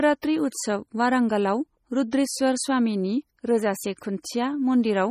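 Throughout the speech, nothing sounds above 15.2 kHz, and what remains turns watery and swirly, with metallic chirps on s sounds and smeared onsets. The likely cause is heavy MP3 compression, fitting roughly 32 kbps. Unlike a plain low-pass filter, detail flickers frame to frame.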